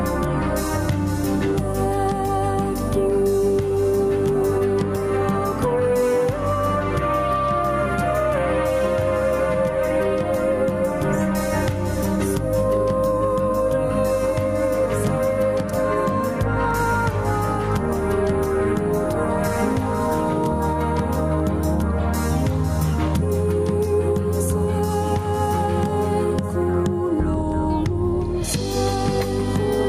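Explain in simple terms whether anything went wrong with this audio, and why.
Gain pumping runs the whole way through. Loud and soft moments end up sitting too close together, giving everything a squashed feel. The likely cause is the input gain set far too high, with a fast limiter or compressor yanking it down on every loud hit.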